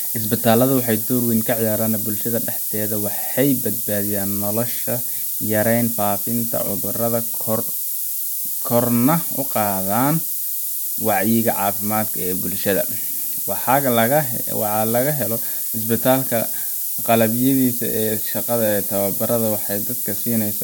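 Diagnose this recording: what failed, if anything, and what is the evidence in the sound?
The failure sits in sample-format conversion: the speech has been requantised to about 5 bits with noise shaping applied. With so few levels, the rounding error is enormous, and the shaping filter feeds that error back so it is pushed toward the top of the band. Throughout the clip this is heard as a steady, thin hiss climbing sharply in the highs, roughly as loud as the speech itself.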